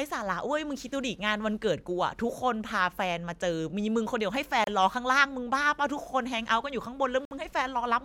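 This speech clip shows what is likely a Bluetooth stall, occurring twice: radio interference delays packets, the headphones' buffer empties before replacements arrive, and playback halts. Each time, the audio drops abruptly to silence and then resumes. The first gap runs from 4.64 to 4.67 s and lasts 30 ms. The second, from 7.25 to 7.31 s, lasts 59 ms. Both are brief holes in the speech rather than fades or glitches.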